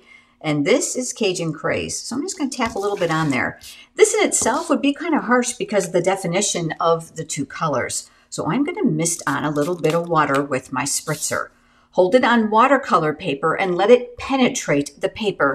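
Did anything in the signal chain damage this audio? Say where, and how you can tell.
No, nothing in the signal chain damaged this audio.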